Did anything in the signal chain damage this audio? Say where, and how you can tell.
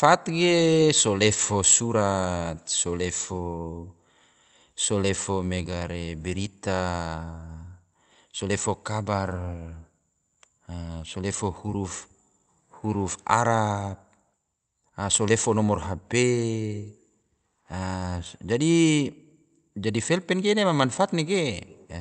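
No, nothing in the chain damaged this speech; it came over a normally working WebRTC call path, and the audible band stops near 8 kHz, which fits that path's Opus coding.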